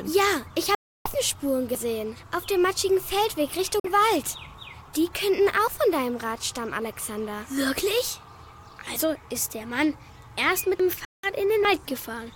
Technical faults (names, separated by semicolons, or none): Bluetooth dropout; dropped buffer (overrun)